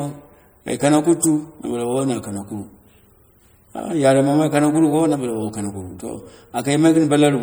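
Throughout the clip the speech has a watery, swirling quality, with dulled treble and smeared consonant attacks. The likely cause is MP3 compression at a low bitrate, around 64 kbps, where the encoder cuts the top end and drops weak frequency components that flicker between frames.

From 1.99 to 2.01 s a short glitch peaking around -15 dBFS appears, and from 3.76 to 3.80 s a quieter one, peaking around -20 dBFS, follows. Both are a corrupt frame decoded: damaged compressed data played anyway, misplacing energy for about one frame at the first time and two at the second.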